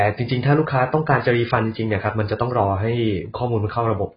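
Throughout, the speech sounds dull and warbly, likely from heavy AAC compression at a low bitrate. A spectrogram shows nothing above 5 kHz.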